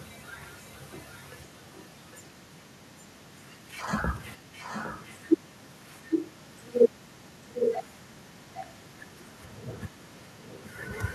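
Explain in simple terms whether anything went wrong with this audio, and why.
A faint, delayed copy of the speech trails behind it by about 0.8 seconds, first from 0.0 to 3.6 s, then more clearly from 4.13 to 10.9 s, where it is noticeably louder. This is an echo leak. The likely cause is that someone on the call was using a loudspeaker, and their echo canceller didn't fully remove what their microphone picked up, so part of the sound was sent back.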